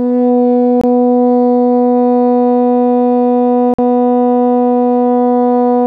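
A music clip with two blocks of digital silence, at 0.81 to 0.84 s (about 23 ms, which fits a 1024-sample buffer) and 3.74 to 3.79 s (about 46 ms, which fits a 2048-sample buffer). Each time the output drops to silence and returns abruptly, most likely from a buffer underrun. The hard, fadeless edges and silent gap distinguish it from a smoothed or concealed dropout.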